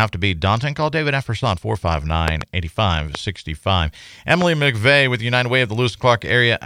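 Sharp loud pops cut through the speech, a double pop between 2.28 and 2.43 s and single ones at 3.15 and 4.42 s, each far louder than the voice, which continues underneath. They are likely sudden voltage spikes from a plug, switch or static.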